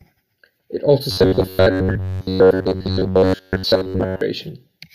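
From 1.11 s to 4.21 s, new audio likely arrives too seldom, so playback repeats a short buffer through most of that stretch. This robotic sound from repeated short buffers turns the speech into a rigid, metallic buzz at 93.8 Hz, which fits an 11 ms buffer.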